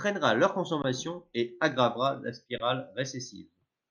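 At 0.82 to 0.84 s, just before "et aggravera", and again at 2.58 to 2.60 s, the speech briefly freezes on a flat, held level, then resumes softly. Each is an underrun with held sample: the output buffer ran dry for 20 ms and the converter held its last value, and playback then continued where it stopped with no speech lost.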